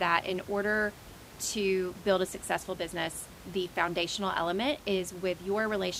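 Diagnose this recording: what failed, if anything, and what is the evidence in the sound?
Nothing failed in this recording; the only thing in the sound besides the speech is room noise sitting about 19 dB below it, which belongs to the room rather than to any stage of the system.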